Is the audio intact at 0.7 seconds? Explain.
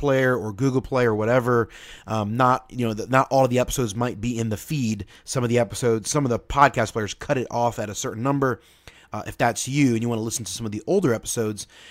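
Yes, the speech at 0.7 seconds plays through intact, with no dropout, click, distortion or other fault at that moment.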